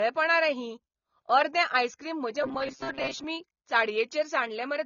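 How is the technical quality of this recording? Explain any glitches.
The recording's technical quality is poor: the whole clip is dull, and there is a burst of metallic buzzing near its middle.

Low-bitrate audio saved at a high bitrate affects the entire clip. The speech was likely squeezed through a low-bitrate codec first, something like 24 kbit/s AAC, and then re-saved as a high-bitrate MP3. The second encode cannot bring back what the first discarded, so nothing is heard above 7 kHz. The speech sounds muffled and lacks crispness despite the generous file format.

Robotic sound from repeated short buffers runs from 2.43 to 3.25 s. Fresh audio was likely arriving too slowly, so playback kept looping the last sliver of audio, around 7.5 ms long, while most of the real signal in that stretch was skipped. The loops impose a steady 134 Hz pitch, turning the speech into a rigid, metallic drone that only loosely tracks its rhythm.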